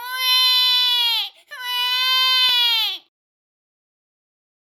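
At 1.51 s and again at 2.49 s there's a tiny skip, the classic overlap between stream segments. Two consecutive segments claimed the same few milliseconds, so the player trimmed real audio and the waveform jumps. The two events sit about a second apart, matching one-second segment boundaries.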